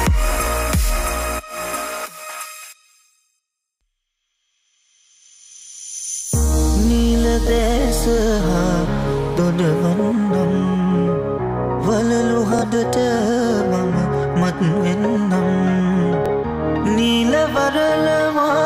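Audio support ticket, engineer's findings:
Brief stutter, a short slice repeating at 12.59–12.63 s and 16.26–16.30 s. Bluetooth stutter: receiver replayed its last buffer over about 23 ms of missing audio, consistent with one lost packet each time.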